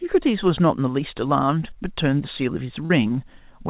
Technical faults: short concealed packet loss

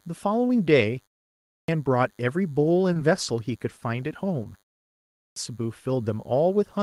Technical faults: DECT cordless phone buzz; short concealed packet loss; clipped start after a pause

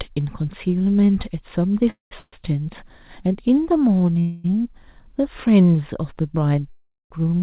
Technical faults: call audio freeze

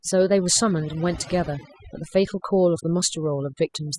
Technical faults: overdone noise removal

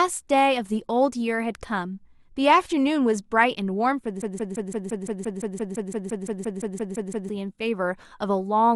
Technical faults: broken-record loop

